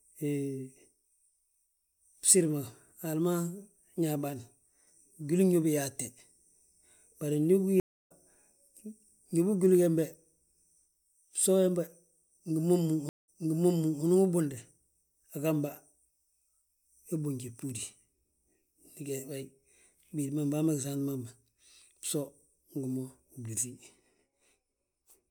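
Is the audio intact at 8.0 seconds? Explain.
No, 8.0 s falls inside a stream reconnect running from about 7.80 to 8.12 s. The connection dropped, so the speech goes silent for 275 ms, then a fresh decoder picks up mid-stream roughly a fifth of a second later, skipping a small chunk.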